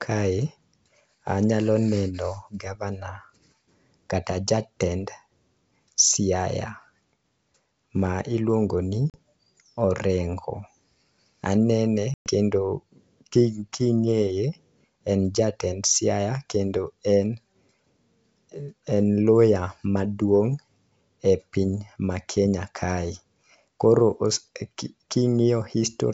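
Speech on a wideband call, clear up to about 7 kHz in a way that fits G.722 at its full 64 kbit/s rate, breaks up twice from packet loss on an ADPCM call: at 9.10 to 9.19 s about 40 ms goes missing (a couple of packets), and at 12.14 to 12.30 s about 120 ms (several packets). Each gap is a hard-edged silence, shown as a flat line in the waveform and a clean vertical blank across the spectrogram. The decoder's predictor and step size no longer match the sender's, so the audio comes back slightly distorted before settling.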